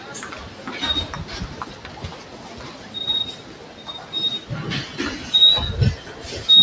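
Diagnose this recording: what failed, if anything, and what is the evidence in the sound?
The call processing stage is what tripped it up: a noise suppressor applied to music or sounds, left on for the whole clip. Steady, sustained parts and decaying tails keep getting pulled down by something like 15 dB, then recover on each new attack, so the sound pumps and thins. The band-limiting to 8 kHz is just the normal call microphone path.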